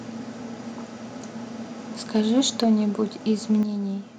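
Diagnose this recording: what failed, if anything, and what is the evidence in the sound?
Microphone overload at the converter: from 2.15 to 2.73 s the loudest syllables take on a harsh, crackling edge. Peaks were driven about 4 dB past full scale, clipping around 2 percent of samples. The waveform shows flattened tops, and the spectrogram shows broadband vertical splatter. The likely cause is microphone input gain set too high.

Microphone volume stepped down, in call processing: the level drops about 2 dB at 2.64 s, right at the clipped stretch, and then about 7 dB at 3.63 s. Voice and background fall together each time. The waveform envelope shows abrupt steps, and the spectrogram darkens uniformly across all frequencies. These steps likely come from automatic gain control lowering the device's input volume.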